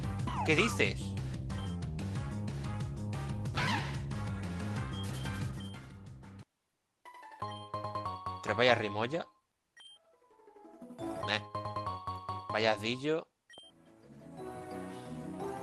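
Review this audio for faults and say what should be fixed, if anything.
No faults turn up in this audio, so nothing needs to be fixed.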